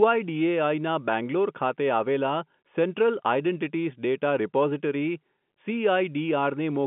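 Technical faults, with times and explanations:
No faults turn up here, just ordinary speech carried over G.711 telephone coding, so the sound sits in the familiar phone band of roughly 150 Hz to 3.4 kHz with nothing above about 3.7 kHz.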